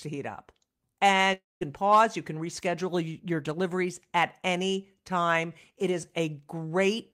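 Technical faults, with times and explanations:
1.33–1.63 s, long network dropout: incoming audio likely stopped arriving, and about 280 ms of speech never played. The receiver extended the last sound as a fading buzz, leaving roughly 180 ms of silence before speech resumes with that stretch gone.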